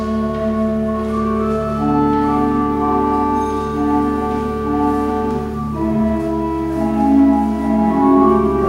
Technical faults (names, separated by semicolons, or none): none